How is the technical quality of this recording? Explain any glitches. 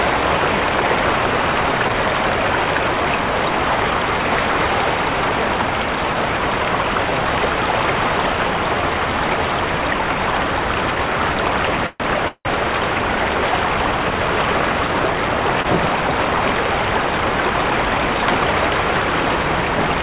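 The recording has three timing glitches in the second half. All of it is band-limited to 4 kHz, which points to a narrowband call codec such as G.711.

From 11.86 to 12.01 s and again from 12.28 to 12.46 s there are two call audio freezes. The likely cause is packets held up in transit, which let the receiver's jitter buffer run dry. The receiver then extends the last sound to cover the gap. In the first freeze this fill lasts about 132 ms. In the second it lasts about 172 ms, fading into roughly 50 ms of silence. When the packets arrive, playback resumes from where it stopped, so nothing is lost, but the audio is pushed later each time.

From 15.62 to 15.66 s there is a short stall from a late packet. One packet was not ready when it was due, so the jitter buffer briefly ran empty and the receiver held the preceding sound for about 22 ms until it arrived. Nothing is dropped. The result is a sound held too long, with a slight buzz or dip, and the audio sits 22 ms later afterwards.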